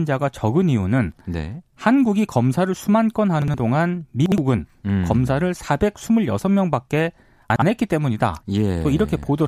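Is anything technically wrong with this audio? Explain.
Yes. The speech has chunks out of order three times: 3.42 to 3.54 s, 4.26 to 4.38 s, and 7.50 to 7.62 s. In each window, a 60 ms chunk arrives one chunk late and plays after the chunk that should follow it. No audio is lost. The two pieces simply swap places. Each one leaves a short scrambled blip, about a tenth of a second long. There are hard joins at the edges and the middle.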